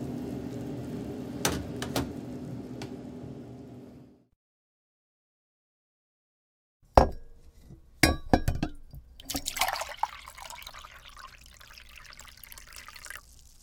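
No technical faults can be heard anywhere in the audio.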